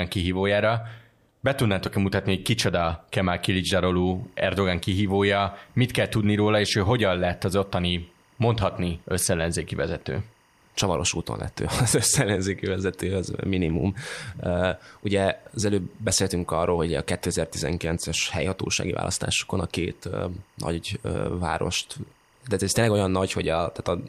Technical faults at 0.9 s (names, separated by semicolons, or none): none